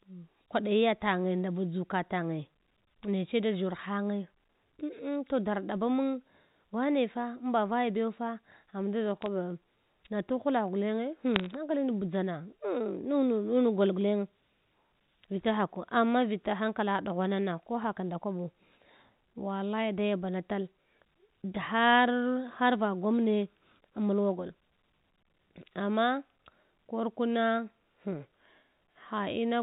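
Bit errors on a digital phone line flip single bits in the 8-bit telephone samples at about 9.22 to 9.26 s and again from 11.34 to 11.51 s. Each hit on a high bit or on the sign of a loud sample becomes a sharp tick, so the speech carries brief crackle.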